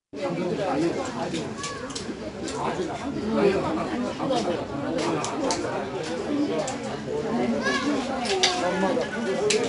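From start to finish the audio carries 4-bit ADPCM compression. Each sample is coded as a coarse step from a predicted value, so a gritty, level-following hiss sits under every loud sound and sharp attacks smear where the step size lags. The damage is plainly audible. Nothing reaches above 10.6 kHz, which points to a sample rate near 22 kHz. A spectrogram shows a hard ceiling there and a noise haze filling the gaps beneath strong events.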